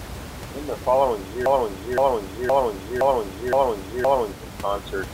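A speech recording with a broken-record loop: just after "the following", at 1.46 s, a 0.52 s fragment repeats back to back six times until 4.33 s, the likely result of a stalled player or stream resending its last buffered piece, so the intervening speech is lost. Room noise sits about 10 dB below the speech throughout.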